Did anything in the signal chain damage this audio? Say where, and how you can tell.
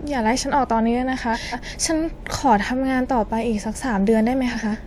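Yes. The damage happened at the network stage, where frames out of order were decoded as received. From 1.33 to 1.74 s, and again from 4.53 to 4.76 s, the sound turns into a garbled flutter. The first stretch is two adjacent runs of roughly 0.19 s each, and the second is two adjacent runs of roughly 0.09 s each, played with their halves exchanged. A dropout or repeated packet would leave a gap or a stutter. Here nothing is missing or duplicated, and the timing stays intact.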